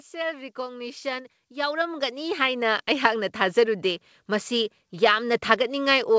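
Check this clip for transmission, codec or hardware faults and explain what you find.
There's one real fault here, an automatic gain rise at the start. From 0.1 to 3.65 s the gain control decides the input is too quiet and keeps turning it up, by about 14 dB in total. Because it's a gain stage rather than the talker, the speech and the background noise swell together before the level settles. The call path itself sounds like it's doing its job, with nothing above 8 kHz, which fits a wideband codec such as G.722.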